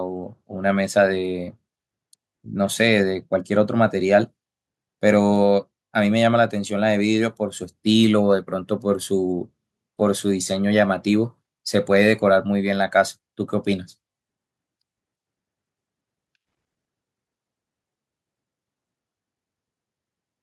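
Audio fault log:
No fault can be heard anywhere in the speech recording. There is nothing here to log.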